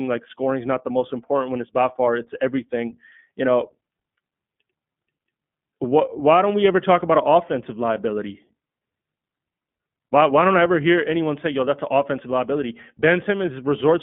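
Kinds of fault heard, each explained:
iLBC codec: The whole clip has gone through this narrowband VoIP codec, which codes each short frame's excitation on its own instead of building on the previous one. The speech sits in a telephone band from roughly 150 Hz up to 3.5 kHz, so it sounds thin and boxy, and there's a clearly audible rough, slightly synthetic grain throughout. The texture fits 20 ms frames at the codec's 15.2 kbps mode.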